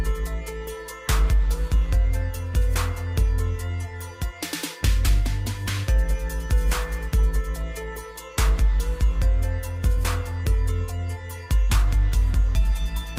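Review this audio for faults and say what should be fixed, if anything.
Nothing here needs fixing.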